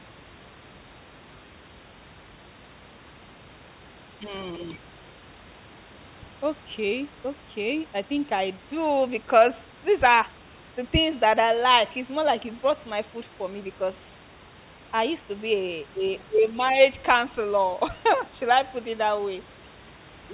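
No faults are audible in the speech: the band stops at 4 kHz, which fits a G.711 mu-law call path at 64 kbps, and the room noise sits about 29 dB below the talker.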